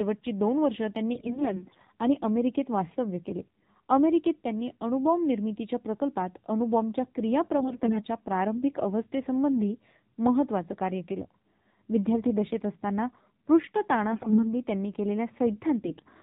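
AMR narrowband mobile codec damage runs through the whole of this speech clip and is plainly audible. Nothing above 4 kHz survives, and the voice has the buzzy, synthetic edge of a vocal-tract model rebuilt from sparse pulses every few milliseconds. That thin, mechanical quality points to a low coding rate, consistent with roughly 7.4 kbps. AMR bit errors appear at 1.14–1.87 s, 7.58–8.04 s, 14.12–14.44 s and 15.86–16.02 s. In these stretches the voice keeps roughly its pitch and loudness but turns hoarse, scratchy and gargly. Corrupted bits on a weak link scatter the excitation pulses and skew the finer pitch, gain and spectral values, while the protected core bits still pass their check. The damage sounds like about one bit in ten going wrong, somewhat heavier around 14.1 s.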